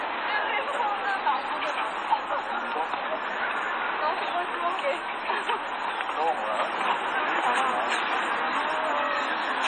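Everyday sound, likely squeezed by heavy MP3 compression at a low bitrate near 32 kbps, which leaves nothing above 9.2 kHz and gives a watery, swirling texture throughout.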